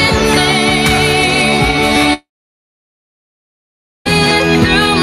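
A long network dropout runs from 2.13 s to 4.07 s in this audio. At 2.13 s the last sound is carried on briefly as a fading buzz, and after about a tenth of a second it gives way to roughly 1.8 s of silence. The likely cause is the packet stream stopping while the receiver's concealment stretched the final sound before muting. Sound resumes at 4.07 s, with about 1.92 s of material lost.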